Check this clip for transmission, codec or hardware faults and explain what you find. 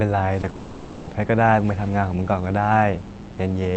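Three transmission faults are audible early in this speech clip: two short concealed packet losses and one long gap. The call codec's limited bandwidth, with nothing above about 8 kHz, is present throughout.

Short concealed packet loss occurs at 0.41 to 0.45 s and again at 0.49 to 0.53 s. Each time about 20 ms of audio failed to arrive, and the decoder patched the hole by extending the preceding sound before blending back. Each is heard as a brief smear or wobble. They are very short and the speech picks up immediately afterwards, which distinguishes them from the dropout that follows.

The long network dropout runs from 0.55 to 1.09 s. For about 520 ms the sound is replaced by a continued buzz-like extension of the last speech that gradually loses definition. The cause is likely a network dropout during which no audio reached the receiver. Unlike the brief smears, this is a sustained stretch of synthetic fill, and the speech then resumes with that half-second of content missing.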